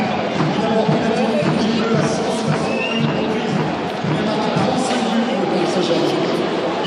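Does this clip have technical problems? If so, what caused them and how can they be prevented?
No, nothing technical stands out here, so there's no problem to trace back or guard against.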